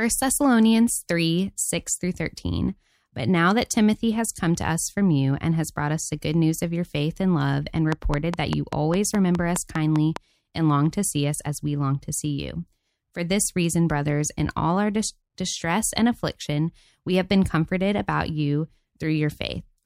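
A train of clicks starts at 7.92 s, right after "faith and love and", and runs until 10.17 s, just before "and long to see". About ten sharp pulses arrive at a steady 4.9 per second. Each has much the same shape. They peak about 15 dB above the speech, so they stand out clearly as regular ticking over the voice. The cause is likely interference from nearby equipment or a faulty connection or power supply injecting repeated pulses.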